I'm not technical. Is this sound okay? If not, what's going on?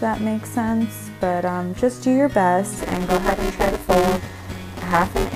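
No. From about 2.78 s until the end, the sound picks up a steady robotic buzz, pitched at about 172 Hz. This is buffer tearing. The program feeding audio to the playback hardware has fallen out of step with it. In each small chunk, roughly half is audio from a moment earlier, about 10 ms old, spliced against the current audio with hard joins. That repeats 172 times a second, which fits a 256-sample buffer.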